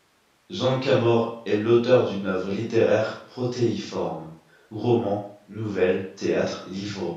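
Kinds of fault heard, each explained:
Nothing here needs flagging; the speech comes across without any technical faults worth pointing out.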